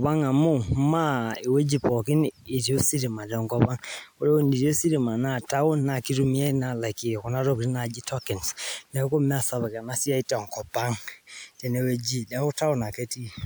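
Nothing in this recording stood out as a technical problem on listening.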